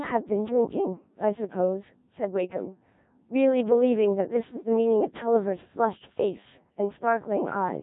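The whole clip has gone through a Codec 2 vocoder, which fits a rate around 1.3 kbit/s. It's heavily damaged, robotic and buzzy, rebuilt from sine waves, with nothing above 3.8 kHz.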